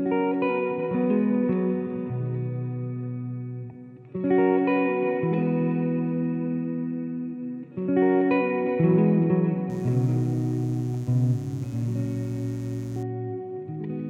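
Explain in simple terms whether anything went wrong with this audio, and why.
From about 9.70 s to 13.03 s, a steady, raspy mains buzz sits quietly underneath the sound. Electrical interference, likely from something like a dimmer or poor shielding, crept into the recording and pulsed twice with every cycle of the 60 Hz power supply. A plain mains hum is a smooth, low drone. This one sounds harsh and gritty because its sharp spikes add many higher tones, reaching up into the kHz range.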